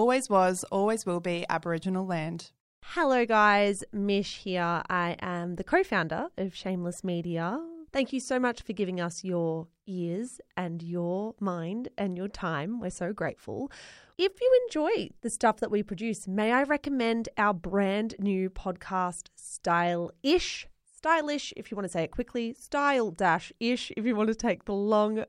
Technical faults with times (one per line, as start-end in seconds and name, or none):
none